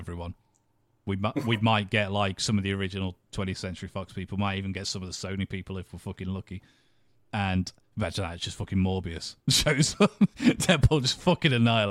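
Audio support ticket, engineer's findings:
No audible faults found.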